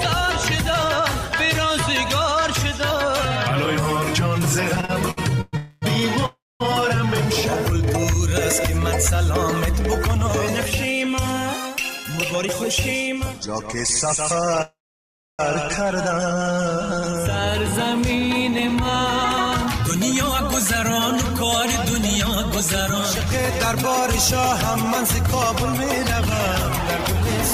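From 4.75 to 5.55 s, packets kept arriving late, so the jitter buffer ran dry five times. This is a repeated-stall stutter: the receiver stretched the last sound over each gap, the longest 117 ms, filling about a third of that span. The audio drags and hiccups without losing anything.

A call audio freeze follows, likely caused by packets held up in transit leaving the buffer empty. From 5.57 to 5.84 s the last sound is carried on for 250 ms as a fading buzz or hiss. From 6.26 to 6.62 s it is carried for 344 ms, 230 ms of it silent. From 14.62 to 15.41 s the hold lasts 770 ms and includes 640 ms of silence. Each time the audio resumes where it stopped.

From 11.89 to 13.69 s an overfull buffer triggers a jitter buffer speed-up. Pitch-period slices totalling about a tenth of a second are cut, so the sound runs 6% fast at unchanged pitch and feels hurried. Milder speed-ups follow at 18.52 to 20.94 s (3% fast, under a tenth of a second removed) and 22.49 to 25.48 s (1% fast, a few hundredths removed).

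From 15.91 to 16.44 s, right after the long freeze, the buffer rebuilds its reserve through a jitter buffer slow-down. Repeated pitch periods or bits of pauses add 50 ms, and the sound plays at 92% speed, drawn out but unchanged in pitch.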